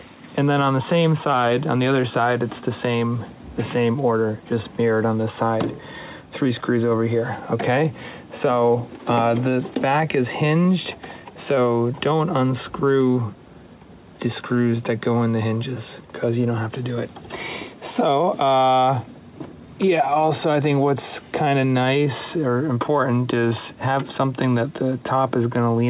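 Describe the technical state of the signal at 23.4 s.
At 23.4 s the signal is intact, with no dropout, glitch or distortion, only the narrow band of a G.711 call path with nothing above 4 kHz.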